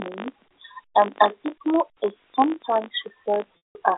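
Right from the start and all the way through, there's a steady buzz riding on the speech at 50 Hz. That's a filter being restarted on every block: it loses its memory at each block boundary and starts again from silence, so every block opens with a small click. At 50 per second those clicks fuse into a buzz, which fits 20 ms blocks. It gets louder and quieter with the speech, because each transient scales with the signal level.

Near the end, from about 3.58 s to 3.75 s, there's packet loss with pitch repetition. About 180 ms went missing in one continuous run, which fits roughly six 30 ms packets. The receiver covers the gap by looping the last pitch period and fading it out. You hear a brief held, buzzy tone that dies away before the speech returns through a short cross-fade. The narrow telephone band of the G.711 line, about 300 Hz to 3.7 kHz, is audible around it.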